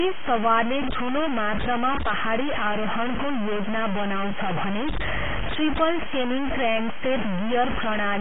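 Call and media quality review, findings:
Grainy distortion throughout, tracking the speech; quiet stretches sputter or drop out; noise nearly as loud as the signal. Likely low bit depth without dither, consistent with truncation to about 3 bits.

Hard band limit throughout, nothing above 3.7 kHz; smeared codec artefacts remain. Likely low-bitrate audio saved at a high bitrate, fitting a 16 kbit/s AAC source re-encoded as 192 kbit/s MP3.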